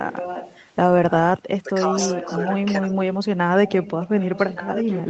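From 0.01 to 0.61 s a faint delayed copy of the speech sits under the main voice, roughly 10 dB down and trailing by about 1.17 s. This is an echo leak, likely from a loudspeaker-side echo canceller letting residual pickup through. It returns at 1.99 to 2.52 s and from 3.67 s to the end.

Between 1.63 and 1.71 s the talker's level dips briefly, by a few dB over well under a tenth of a second. This sounds like speech suppressed in double talk, likely the canceller attenuating the near-end voice while treating overlapping sound as echo.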